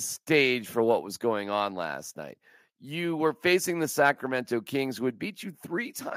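At 1.02 s, between "for what" and "was going on last", the speech level drops suddenly by about 2 dB. Voice and background fall together. This is a microphone volume step-down, likely the call software lowering the input gain in one jump.

From 4.06 to 4.09 s, after "were facing the", the peaks turn harsh and crackly. This is microphone overload. The input was likely set too high, so a small share of samples were pushed about 1 dB past the converter's limit and their tops were cut off.

Right after, at 4.11 s, the level steps down again, by about 1 dB. This second microphone volume step-down follows the distorted peak, likely the software reacting to that overload by turning the input down.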